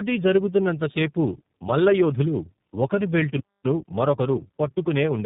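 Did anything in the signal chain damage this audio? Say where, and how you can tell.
Yes. Throughout, the speech sounds rough, muffled and warbly, with nothing above about 3.8 kHz. That is tandem speech coding at the codec stage. The call appears to have passed through G.729A at 8 kbit/s, then G.711 A-law, then iLBC at 15.2 kbit/s. Two low-rate speech coders ran in a row, with the second re-encoding the first one's already damaged output, so their errors stacked.

At playback, right after "జరుగుతున్నంత సేపు మల్లయోధులు ఒకరి", the audio cuts to silence from 3.40 s to 3.64 s, a gap of about 0.24 s, then resumes. This is a playback stall. The likely cause is the player's buffer running dry or its output thread being blocked, so no samples reached the output until it recovered, and the sound stopped in mid-flow.

From 3.64 s to 5.18 s the speech runs hurried at about 1.1 times normal speed but keeps its normal pitch. 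That is time-compressed catch-up at the playback stage. After the stall the player worked off its backlog by cutting out short slices and cross-fading across the joins. This shortened the material without resampling it, which is why the pitch holds while the pace rises.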